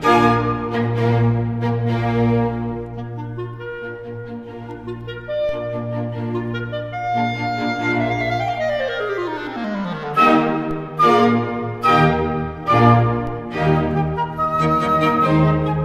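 A low thump lands at 5.49 s, again at 10.71 s and once more at 13.27 s, each a brief knock underneath the sound, which carries on without interruption. These are DC steps: the waveform's zero line jumps suddenly by about -22 dBFS (about -23 dBFS at the last one), and the offset then drains away through a 5 Hz high-pass, so each jump is heard only as that single low thump.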